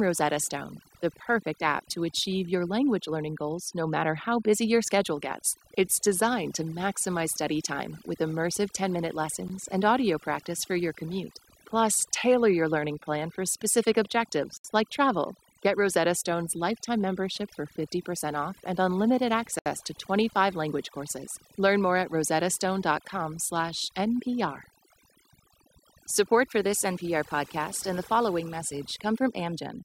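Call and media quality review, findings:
Overdone noise removal, whole clip: background pulled down, breaking up into twinkling specks. Probable component: noise suppressor set far too aggressive.

Mechanism: individual bands near the noise estimate are gated hard down or off, taking quiet voice detail with them. Spectrogram: patchy, holed background with isolated bright dots flickering on and off; weak harmonics and consonant energy missing between voiced regions. Waveform: unnaturally flat floor between phrases.

Block of digital silence, 9.48 s: single tick, gap about 15 ms. Waveform: abrupt drop to a flat line and back, no fade. Spectrogram: thin vertical blank slot.

Block of digital silence, 14.57–14.64 s and 19.59–19.66 s: audible holes, each about 70 ms. Identical lengths suggest a fixed-size block left unfilled. Probable component: playback/output buffer missed in time.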